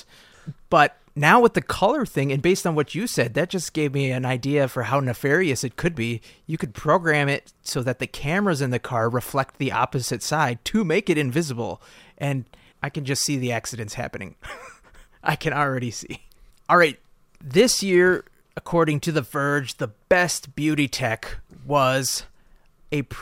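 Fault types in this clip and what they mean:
No technical faults can be heard in the speech; the signal holds steady and intact throughout.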